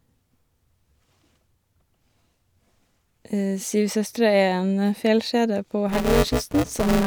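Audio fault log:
5.89–7.06 s, buffer tearing: after "er en fjellkjede på", writer and reader cross each period, so about a third of every buffer replays audio roughly 10 ms stale between hard joins, giving a rattling 188 Hz buzz that fits a 256-sample buffer.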